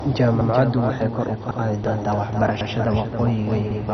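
Right from the start there's a doubled audio track: a second copy of the speech trails the first by roughly a third of a second, maybe 5 dB down. It has no reverb tail or room colour, just a clean duplicate out of step with the original, so it comes across as a flat slapback. The likely cause is the same signal being picked up twice, once through a slower path.

Throughout, the speech carries heavy MP2 compression damage. Nothing makes it above 6.1 kHz, so it's dull and boxy, and what's left has that gurgly, granular texture from coarse quantisation, with upper bands flickering in and out. That degree of damage likely comes from a very low bitrate, in the neighbourhood of 32 kbps.

On top of that there are overlapping chunks. At 0.41 s (just before "waxay kor"), 1.51 s, 2.61 s and 3.71 s, about 100 ms of audio plays twice. That's a steady once-per-second pattern, which fits processing in 1-second chunks where each one starts a little before the previous one finished. 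Each join comes through as a small stutter or hiccup.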